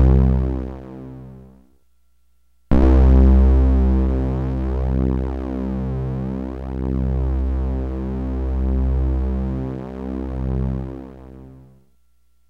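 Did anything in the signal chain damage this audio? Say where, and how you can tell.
No, nothing along the chain audibly damages these sounds, and no stage from capture to playback leaves a mark on the signal.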